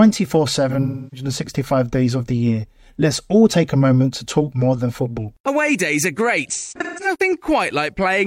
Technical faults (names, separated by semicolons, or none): AAC frame loss with concealment